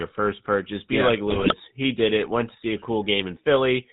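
From the start and through the whole clip, the speech carries the buzzy, gravelly roughness of the GSM full-rate codec, plainly audible, which fits a 13 kbps GSM stream. The codec replaces the real excitation with a sparse train of regular pulses feeding a vocal-tract filter, so voiced sounds acquire a mechanical rasp. Nothing is passed above 4 kHz, which leaves sibilants dull and the overall band narrow.

At 1.30 s, just after "yeah like", GSM bit errors break through until 1.54 s. Corrupted bits reaching the decoder scramble the filter, pitch and gain parameters, so successive frames are rebuilt with the wrong spectral shape and level. The result is a short burst of squawking, popping and gargled distortion lasting about a quarter of a second. This is consistent with around a dozen damaged frames and an error rate of a few percent on the link.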